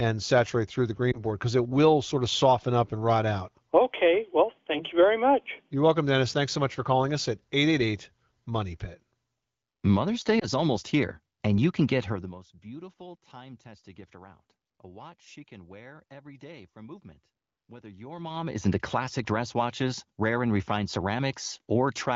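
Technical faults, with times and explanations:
1.11–1.23 s and 10.40–10.46 s, lost AMR speech frames. There are two short glitches. The first falls between "saturate through the" and "because it will sort". The second comes just before "almost here and you". Each sounds like one missing 20 ms frame. The AMR-WB decoder fills the gap by repeating the last good pitch and vocal tract settings at lower gain. So the sound dips or warbles briefly. It then returns weak or rough for a moment.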